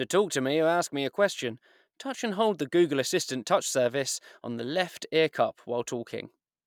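No technical faults can be heard anywhere in this speech recording.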